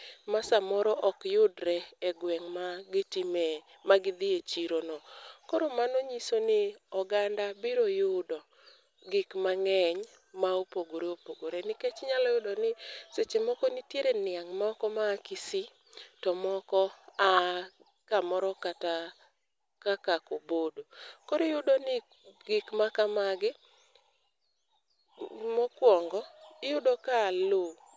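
Nothing goes wrong anywhere in this speech recording, so there's no fault to point to at any moment.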